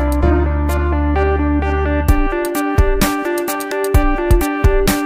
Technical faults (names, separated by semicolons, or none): none